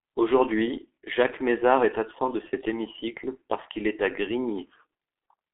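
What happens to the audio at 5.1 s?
At 5.1 s you're hearing the G.723.1 codec damage that runs through the whole clip: squeezed to 6.3 kbit/s, nothing above 3.7 kHz, so speech sounds muffled, hoarse and smeared.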